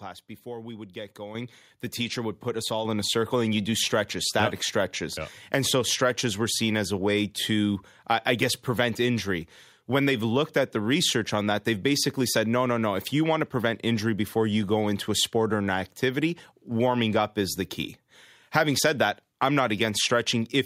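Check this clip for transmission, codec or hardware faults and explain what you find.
One fault appears, a microphone volume stepped up, twice: at 1.35 s the level rises by about 8 dB, and at 2.85 s by about 5 dB more. The call software judged the microphone too quiet and raised the device's input volume in single jumps. The background rises together with the speech, in an instant step rather than a gradual ramp. That separates it from a talker simply getting louder, which leaves the background unchanged, and from smooth gain riding.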